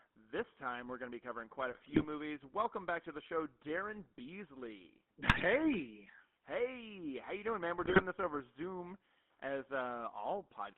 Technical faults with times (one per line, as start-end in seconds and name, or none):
0.00-10.78 GSM full-rate codec
1.71-2.05 GSM bit errors
5.28-5.41 GSM bit errors
7.81-8.02 GSM bit errors